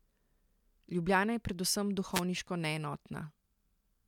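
At 2.12 s, right after "je predvsem", a wireless microphone noise hit lasts about 0.1 s, until 2.22 s. The FM radio link from the microphone fades as reflected signals cancel, so receiver noise rises and is heard as a short swish of static. A digital dropout cuts to silence or a stutter. This burst is hiss, smeared by the fade rather than a clean gap.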